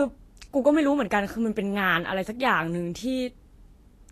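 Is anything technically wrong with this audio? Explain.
Yes. Throughout the speech the treble sounds hissy and grainy, consonant attacks are blurred, and nothing is present above 14.2 kHz. This is likely Vorbis compression: coarsely quantised high-frequency detail turns to noise over a smooth spectral floor, which fits a bitrate around 34 kbps. A plain low-pass filter would dull the sound without this grain.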